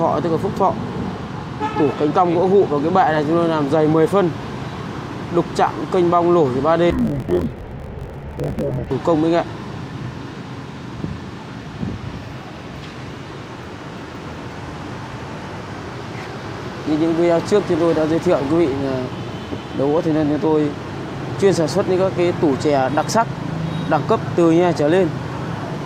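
From 6.90 to 8.91 s, interleaved audio read as planar drops pitch an octave, sounding doubled and choppy, with spectrogram harmonics halved and 21.33 ms block seams visible in the waveform.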